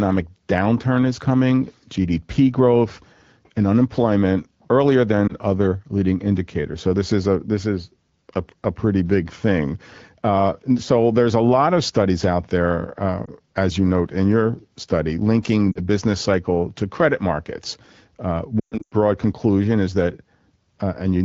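Lost AMR speech frames cause four dropouts. At 5.28 s, after "growth and unemployment earlier", and at 13.25 s, after "studies out there uh", single 20 ms frames fail and the decoder's concealment reuses the last good pitch and vocal-tract settings, leaving a brief dip or warble. At 15.72 s, before "business cycle to credit", two frames (40 ms) go. From 18.59 to 18.93 s, about 240 ms of frames drop out scattered across 320 ms. During the longest gap, 120 ms, the sound drops to near silence within two frames. The wideband codec's clear speech, consistent with around 12.65 kbit/s AMR-WB, returns rough for a moment after each gap.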